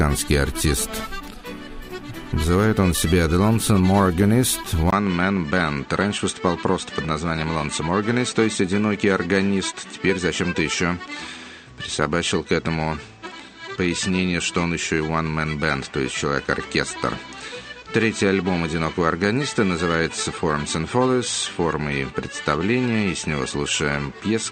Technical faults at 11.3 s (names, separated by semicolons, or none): input switched to a poorer device